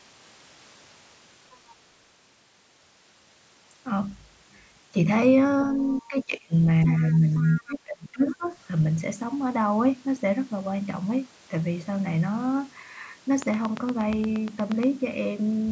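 At 1.51 s a faint scrap of a second voice, about 35 dB below the speech, slips through for roughly 60 ms: the other side's voice leaking through, likely because the device's loudspeaker output reached its microphone and the echo canceller left a residue. Unlike double-talk suppression, this adds sound rather than removing it. The leak returns at 5.93 s, again brief and about 30 dB down.

Between 5.73 and 6.53 s the main speech dips by as much as about 15 dB over roughly half a second. This is speech suppressed in double talk, likely the canceller turning everything down when both ends spoke at once.

From 6.86 to 7.19 s the leaked voice is much stronger, only about 10 dB below the speech, and then comes back from 7.35 to 7.63 s at about 20 dB down. A short dip of about 5 dB comes at 7.2 s, between them. The deepest suppression runs from 7.58 to 8.53 s and reaches about 25 dB over roughly 0.7 s. 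The call's sound is band-limited, with nothing above 8 kHz.

From 13.42 to 14.84 s a train of clicks ticks steadily at about 8.5 per second, around 15 pulses in all, peaking roughly 10 dB above the signal. The likely cause is interference or a faulty connection. The even spacing and much the same shape of the clicks separate them from random crackle.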